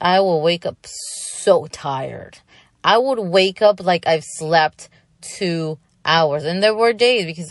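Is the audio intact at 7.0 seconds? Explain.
No. At 6.97 s, a pre-echo occurs: the encoder kept a long 48 ms window instead of short blocks, so quantisation noise about 12 dB up leaks 16 ms ahead of an attack as a brief hiss, softening it. Throughout, there is also plainly audible MP3 compression, likely from a bitrate around 48 kbps, giving watery, swirly treble and smeared attacks.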